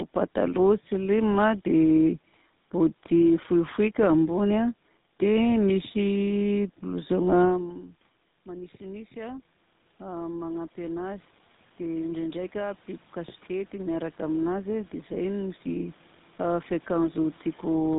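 From start to end, tandem speech coding: the speech passed through AMR-NB at 12.2 kbit/s, then G.711, then GSM full rate, so two lossy speech coders stacked their errors. It sounds rough, muffled and warbly; a spectrogram shows nothing above 3.8 kHz and smeared, blotchy harmonics.

After the talker moves away from the microphone around 7.5 s, which drops the input by about 20 dB, automatic gain rising runs from 8.45 s to 17.94 s, adding about 15 dB gradually. Voice and room noise swell together, and the waveform envelope and noise floor climb steadily.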